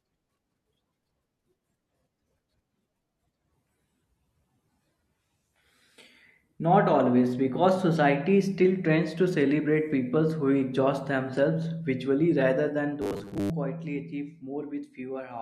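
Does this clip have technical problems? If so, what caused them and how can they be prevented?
Yes. From 13.02 to 13.50 s, between "themselves visually rather than" and "quietly achieve", the audio was likely arriving too slowly for playback, so the software kept replaying a 10 ms slice instead of waiting, and most of the real audio in that stretch was skipped. Those repeats impose a fixed 100 Hz pitch, producing robotic sound from repeated short buffers: a stiff, metallic buzz that only loosely tracks the speech. Preventing it means giving the stream enough buffering and processing headroom to keep delivery steady.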